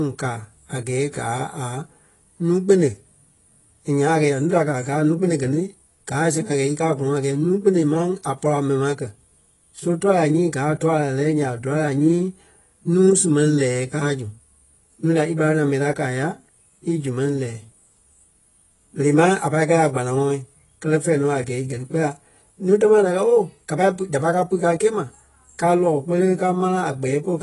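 From start to end, the speech sounds dull and smeared. Nothing is heard above 11.5 kHz. Sibilants fizz and sustained sounds warble. The likely cause is AAC compression. The encoder cut the top band and coarsely quantised the rest, which fits a bitrate around 32 kbps.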